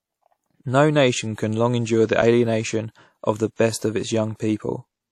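Throughout, the speech carries plainly audible ringing and a washy hiss that breathes with the signal, with nothing above 15.9 kHz. This is likely WMA compression, and the damage fits a bitrate around 48 kbps.

At 2.22 s the audio drops out for 5 ms and is heard as a tick or dip rather than a silence. This is a block of digital silence, where the audio cuts to zeros and back with no fade.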